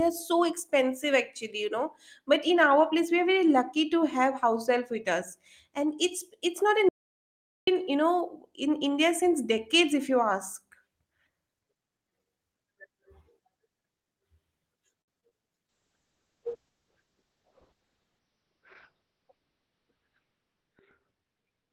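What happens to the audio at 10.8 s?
Nothing goes wrong at 10.8 s: the speech carries on intact through that moment, with no dropout, click, distortion or other fault.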